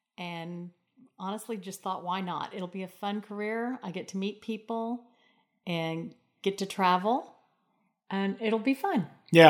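From 0.17 s to 5.04 s the automatic gain rising is audible: the gain control judged the input too quiet and lifted its gain by about 9 dB over nearly five seconds, so the speech and the background noise swell upward together.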